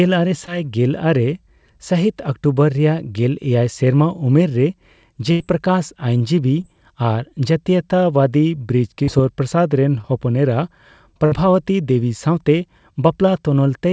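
At 0.46 to 0.49 s there is a short concealed packet loss. About 20 ms of the call arrived too late to decode. The receiver extended the last sound to fill the hole, then blended back into the real signal. It comes across as a brief smear or wobble. The same fault returns at 6.62 to 6.65 s, 9.03 to 9.09 s and 10.01 to 10.05 s. The one at 9.03 s is the longest, with about 40 ms missing.

At 5.31 to 5.42 s comes a burst of packet loss. About 80 ms in a row failed to arrive. The receiver kept repeating the last sound and faded it as the gap went on. It sounds like a held buzz or dying hiss. When the audio resumes, the stretch in between is gone. A second burst at 11.25 to 11.34 s drops about 60 ms the same way. Throughout, nothing is heard above about 8 kHz, which fits a wideband call codec such as G.722.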